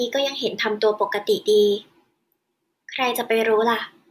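A short bit of speech, and there's nothing technically wrong to point to anywhere in it.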